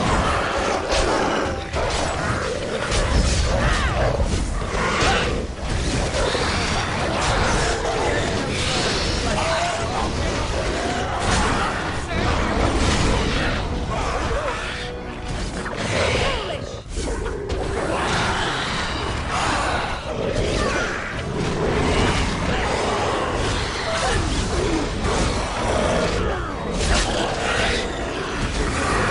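Nothing stood out on listening to this audio.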